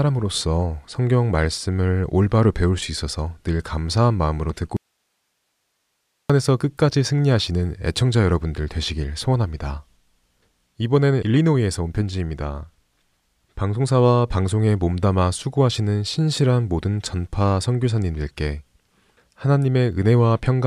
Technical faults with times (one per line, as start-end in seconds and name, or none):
4.77-6.30 audio dropout to a faint residue